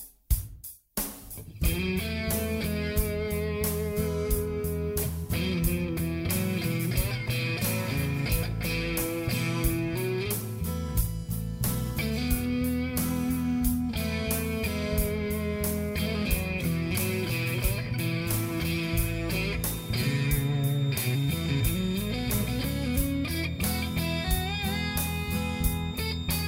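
From 19.52 s to the end at 26.47 s, a feedback whistle sits behind the sound: a thin, steady tone at 3.7 kHz, some 15 dB below the signal and swelling and fading slowly in level. It is likely a loudspeaker-to-microphone loop poised at the edge of feedback. A spectrogram would show one unbroken horizontal line at 3.7 kHz.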